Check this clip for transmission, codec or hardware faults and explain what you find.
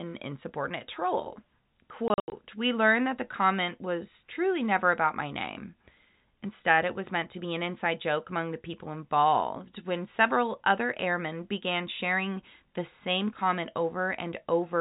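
One transmission fault, packet loss filled with silence, between 2.08 and 2.32 s: about 160 ms of this speech drops out in gaps up to 80 ms long, with hard edges that fit 20 ms packets. The G.711 telephone coding limits the sound to the 4 kHz telephone band.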